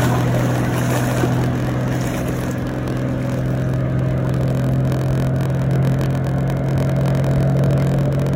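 From start to finish a steady low buzz near 43.1 Hz sits under the sound, and everything plays at 0.938 times normal speed while the timbre stays the same. This is a block size mismatch with padding: one stage hands over shorter blocks than the next stage reads, so the remainder of each block is filled with silence. The buzz rate fits a 1024-sample read buffer, with each block arriving about 6% short.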